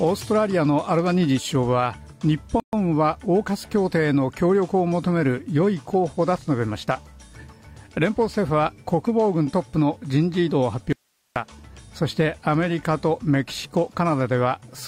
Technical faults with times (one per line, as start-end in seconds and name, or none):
2.60-2.73 gap at a join of encoded pieces
10.93-11.36 audio dropout to a faint residue